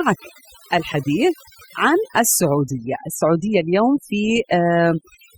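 From start to finish the speech carries overdone noise removal: an overly aggressive reducer mutes individual frequency bands near its noise estimate, leaving near-silent gaps sprinkled with twinkling specks. Unlike a noise gate, which silences everything at once, this removal works band by band.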